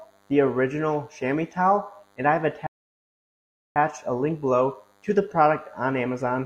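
A thin, steady buzz runs under the audio from start to finish. It is DECT cordless phone buzz. A nearby DECT handset or base sends a radio burst every 10 ms. The audio circuit rectifies it into a 100 Hz tone rich in harmonics, about 40 dB below the sound. At 2.67 s the audio drops to silence. It picks up again at 3.76 s, exactly where it left off. This is a rebuffering stall. The player ran out of downloaded data and waited for more. No audio is lost, but about 1.09 s of silence is added.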